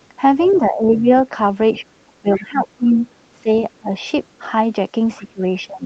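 Other side's voice leaking through, 0.42 to 0.59 s: a faint second voice, roughly 25 dB under the speech, slips in, likely because the echo canceller left part of the loudspeaker signal in the microphone feed. Speech suppressed in double talk follows at 0.58 to 1.1 s. The talker dips by up to about 10 dB for around half a second, likely because the canceller, facing both voices at once, turned everything down.

Speech suppressed in double talk returns from 1.73 to 4.41 s, harder this time. Drops reach about 15 dB, adding up to roughly a second of thinned or chopped speech, likely the canceller again mistaking the talker for echo. Inside that stretch, other side's voice leaking through runs from 2.34 to 3.13 s, about 20 dB down. That is the loudest leak in the clip, likely residual echo that escaped cancellation.

Other side's voice leaking through appears again at 5.17 to 5.21 s as a brief scrap about 30 dB down, likely another echo remnant. 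Speech suppressed in double talk then takes over from 5.19 s to the end. The voice sinks by as much as about 20 dB over some 400 ms, likely the same gain-down response to overlapping talk.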